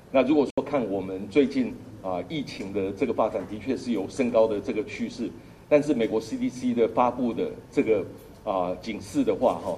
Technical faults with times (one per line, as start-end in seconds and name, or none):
0.50-0.58 Bluetooth dropout